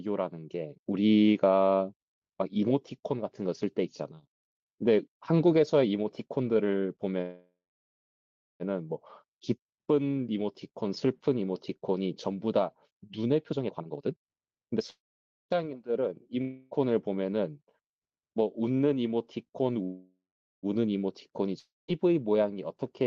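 Call audio freeze at 7.21 to 8.63 s: the sound stops and its last fragment smears into a fading buzz, then about 1.04 s of silence, before resuming exactly where it left off. Nothing is lost; the likely cause is packets arriving late and emptying the jitter buffer.

Jitter buffer speed-up from 13.43 to 14.81 s: the speech runs at 156% speed with unchanged pitch and sounds hurried. Roughly 0.7 s of audio is trimmed in tiny pitch-period slices to shed excess buffered delay.

Call audio freeze at 14.90 to 15.53 s: the same fading buzz, then about 0.52 s of silence, before the speech picks up intact.

Long network dropout at 16.41 to 16.74 s: a brief concealment buzz bridges the hole without reaching silence, and 0.3 s of speech is simply gone when audio returns, likely because the packets never arrived.

Call audio freeze at 19.83 to 20.66 s: again the sound buzzes out and falls silent for about 0.43 s, then resumes with nothing missing.

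Long network dropout at 21.59 to 21.91 s: a fading buzz and about 0.19 s of silence, after which the speech returns about 1.02 s further on. The skip cuts the accumulated delay by roughly 0.7 s.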